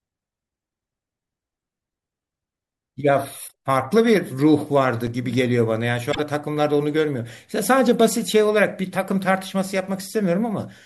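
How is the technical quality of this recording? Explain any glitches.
The recording has three glitches worth knowing about, two of one kind and one of another.

Around 3.45 to 3.52 s and again at 6.09 to 6.20 s there's damaged data in the compressed stream: the decoder loses sync, hunts for the next frame, and you get a short glitch.

At 5.07 s there's a block of digital silence, a 5 ms dropout where samples went to zero, leaving a tick or dip.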